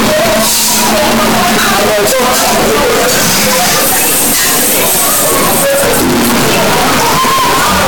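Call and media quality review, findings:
Signed and unsigned mixed up, whole clip. Harsh, very loud distortion throughout. Quiet passages as loud as peaks. Likely an 8-bit sample-format mismatch in decode or playback, top bit flipped. Each zero crossing jumps across the full range.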